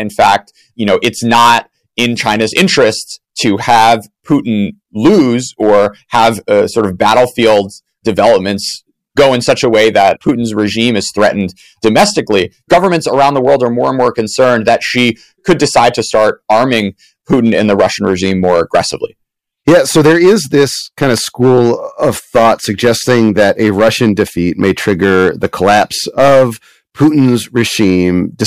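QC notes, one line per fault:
Throughout: hard clipping. The speech reaches the stage about 12 dB hotter than it can pass, so every loud peak is sliced flat. Only a few percent of samples go over. The squared-off tops add harmonics high up the spectrum. They are heard as a harsh, buzzy fuzz on each loud moment.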